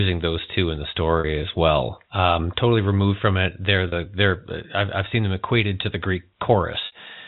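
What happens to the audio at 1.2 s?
Packet loss with pitch repetition strikes from 1.20 to 1.24 s, between "those two in the" and "as well um totally". The receiver repeats the last pitch period across the 40 ms gap, giving a brief held, buzzy tone.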